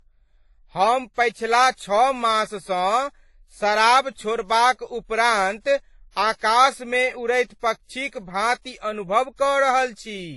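Across the whole speech clip, nothing is present above 11.4 kHz, and the speech carries two overlapping layers of coding damage, the artefacts of each codec heard together. This is likely transcoding between lossy codecs, with sound that points to a low-rate AAC pass followed by a WMA re-encode that spent its bits on the first codec's artefacts. A spectrogram shows a hard ceiling at 11.4 kHz.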